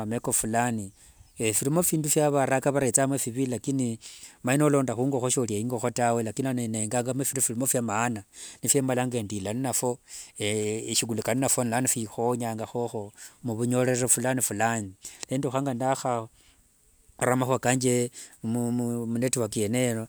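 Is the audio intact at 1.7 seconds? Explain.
Yes, the speech at 1.7 seconds plays through intact, with no dropout, click, distortion or other fault at that moment.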